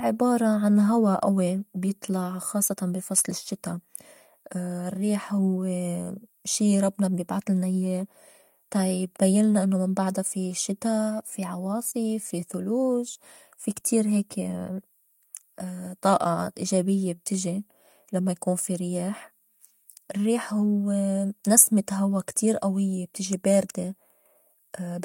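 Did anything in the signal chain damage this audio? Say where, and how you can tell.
No, no damage is audible.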